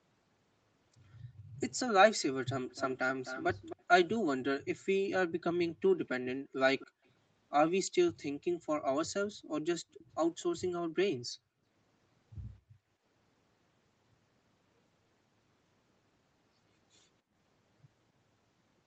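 From 1.24 to 1.55 s, the background is gated by the echo canceller. The room sound dips by about 15 dB while the far-end loudspeaker plays, then returns.

From 2.69 to 3.83 s, a faint copy of the speech trails 260 ms behind, about 15 dB down. This is likely an echo leak, where the canceller failed to remove the loudspeaker sound.

Between 5.3 and 13.0 s, the gating returns in scattered bursts totalling around a second and a half. The background drops by up to about 36 dB.

Inside that stretch, the echo leak recurs at 6.07 to 7.09 s, about 20 dB down. It comes back at 9.99 to 10.43 s, now barely audible at about 30 dB down. Each repeat arrives with the same 260 ms delay.

At 17.22 to 17.34 s, a final brief gate dips the room sound by about 18 dB.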